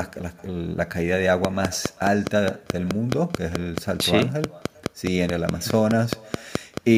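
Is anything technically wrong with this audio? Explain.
Yes, the recording has two faults.

Throughout the speech there is echo with no canceller: the far end's loudspeaker output is picked up by its microphone and returned unremoved. Each phrase is shadowed roughly 400 ms later by a thin copy about 26 dB below the direct speech.

From 1.45 s to 6.78 s a train of clicks runs over the audio, including the pauses, at a regular 4.69 per second, about thirty in all, peaking around 20 dB above the signal. Nearby electrical interference or a faulty connection or power supply is the likely cause.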